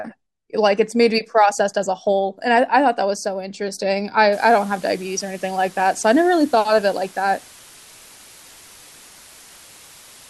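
From about 4.33 s to the end, the speech drops to low bit depth with dither, around 7 bits. Dither randomises the rounding error, so instead of grainy distortion you get a steady, even hiss sitting roughly 25 dB under the speech, constant right through.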